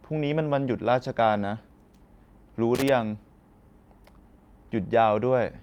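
Speech, with a loose connector crackle from 2.75 to 2.89 s: an irregular scratchy burst as a worn contact chops the signal, unlike the single clean tick of a digital click.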